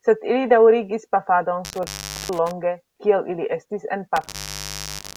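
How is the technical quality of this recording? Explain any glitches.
The recording is marred by an intermittent contact fault, occurring twice. Between 1.64 and 2.51 s, and again from 4.16 s to the end, a loose connection briefly opens, cutting the speech for about 0.43 s and then 0.64 s. Crackle at each break and faint hiss during the gap distinguish it from a clean digital dropout.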